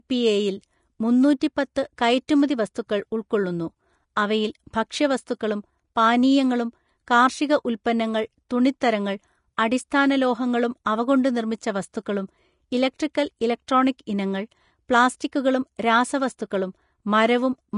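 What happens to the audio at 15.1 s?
Vorbis compression at 15.1 s, as throughout the clip: nothing remains above 10.6 kHz, and the treble left below it sounds hissy and grainy, with roughened tones. This is likely a low-bitrate Vorbis encode, consistent with about 35 kbps, coarsely quantising fine detail into noise.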